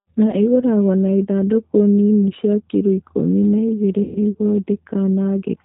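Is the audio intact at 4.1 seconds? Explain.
No. From 4.03 to 4.19 s, just after "cia kiro ikũmi na", there is VoIP packet loss concealed by the speech codec. About 120 ms of audio went missing, which fits six 20 ms packets. The decoder filled the gap by repeating its last pitch and vocal tract filter at falling gain, so the speech smears into a fading buzzy tone or coloured noise. The waveform shows a repetitive, decaying stretch. The spectrogram shows flat, frozen bands instead of moving formants, and weak or distorted speech just after the gap.

The whole clip, this moment included, also carries the G.729 codec at 8 kbit/s, with plainly audible damage. The speech is rebuilt from a filter, a pitch predictor and a few pulses per frame, so it sounds rough and synthetic. On a spectrogram, nothing appears above 4 kHz, and the harmonics look grainy and smeared.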